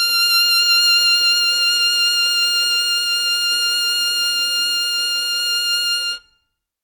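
No technical faults can be heard anywhere in this music clip.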